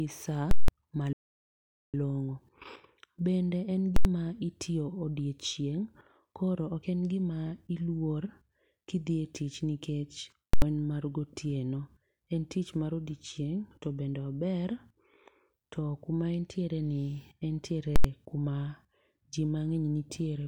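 At 0.51 s the speech is hit by invalid numbers at full scale, lasting until 0.68 s. A calculation produced infinite or invalid values. These were forced to the largest sample value for the whole block. You hear a loud pop at 0.51 s, silence, then another pop at 0.68 s. The 171 ms span fits an 8192-sample block.

From 1.13 s to 1.94 s the speech cuts off mid-flow. It stays silent for about 807 ms, then resumes. This is a playback stall. The player likely ran short of data or its thread was blocked.

The same full-scale fault returns three times, at 3.96 to 4.05 s, 10.54 to 10.62 s, and 17.96 to 18.04 s. Each lasts 85 ms, which fits a 4096-sample block.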